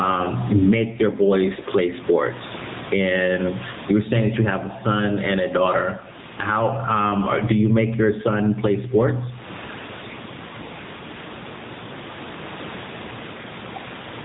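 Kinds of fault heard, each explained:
Gain pumping: The level keeps surging and sinking by around 20 dB, clamping down under each loud syllable, which squashes the speech. This is likely an over-set microphone gain with a fast limiter clamping down. Unlike a steady compressor, it swings the level with each loud sound.
AMR narrowband mobile codec: The speech is coded at narrowband telephone quality, with nothing above 3.8 kHz and a plainly buzzy, synthetic edge. That fits the AMR-NB mode around 7.95 kbps, where a few pulses per subframe drive a vocal-tract model. Simple band-limiting would dull the sound without adding this synthetic buzz.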